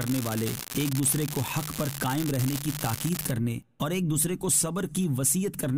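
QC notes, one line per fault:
0.0 to 3.31 s, unreliable data bit: one marginal data line flips its bit in a random share of samples, adding equal-sized spikes of about -12 dBFS heard as a steady fizzy crackle, pauses included. The waveform shows scattered same-height spikes; the spectrogram shows broadband speckle.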